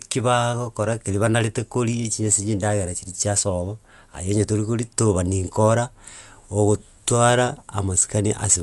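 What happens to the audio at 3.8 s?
At 3.8 s the speech carries the same damage heard across the whole clip, most likely from Dolby Digital compression. The sound is dull, with nothing above about 11.5 kHz, and a rough, fluttering noise hangs around tonal parts. That fits an AC-3 style encoder starved of bits, which fits a rate near 64 kbps: it narrows the band and leaves many frequency lines without mantissa data, so the decoder fills them with dither noise.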